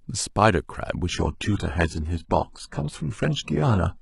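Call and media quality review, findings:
Adaptive stream at a lower bitrate, 1.09 s to end: speech suddenly dulls, nothing above 11.1 kHz, no gap. Player dropped a rung, sounds like low-rate HE-AAC.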